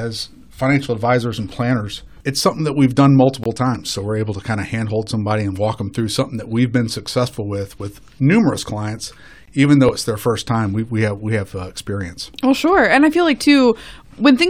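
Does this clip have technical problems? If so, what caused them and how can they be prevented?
Yes. Two short holes cut into the speech at 3.44 to 3.46 s and again at 9.46 to 9.48 s, each a flat 20 ms of silence. This is a gap between chunks: the audio was delivered in 6-second pieces, and each join left a small stretch of silence, which is why the holes fall about 6 s apart. Trimming codec padding and scheduling each chunk to start seamlessly from the previous one's end would prevent it.

There are also two small jumps in the speech, with no silence, at 3.75 s and 9.89 s. The first skips about 10 ms of sound and the second only a few milliseconds. This is likely a dropped buffer (overrun): the capture software didn't read its samples in time, the hardware overwrote them, and the audio on either side was spliced together. Using larger buffers or giving the capture thread higher priority would prevent it.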